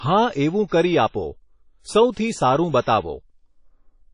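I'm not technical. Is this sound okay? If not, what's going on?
No. The whole clip has a ringing, washy sound, with a hiss that rises and falls with the speech. Nothing comes through above 10.1 kHz, so it sounds dull. This is likely WMA compression, which saved space by discarding fine detail and smearing the rest.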